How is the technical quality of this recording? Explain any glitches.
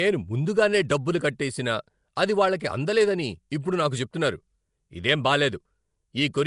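The quality is noticeably rough, with plainly audible codec damage all the way through and two brief smeared attacks.

Throughout, the speech has a hissy, grainy halo and an underwater smear, with nothing above 10.6 kHz. That points to Nellymoser compression as the likely cause: the old Flash codec gives weak bands no bits and fills them with noise, at a rate consistent with roughly 44 kbps.

At 2.16 s and again at 2.60 s there's pre-echo, about 11 ms of hiss leading into a sharp onset that sounds softened. The transform block spreads its quantisation noise evenly, so noise meant for the loud attack leaks into the quiet moment just before it.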